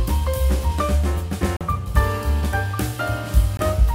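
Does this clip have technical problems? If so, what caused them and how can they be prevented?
Yes. The sound cuts to silence from 1.57 to 1.61 s (43 ms) and from 3.57 to 3.60 s (21 ms), resuming as if it had played on; this is likely Bluetooth dropout, with packets arriving too late. Keeping the source close to the headphones, away from 2.4 GHz interference, prevents it.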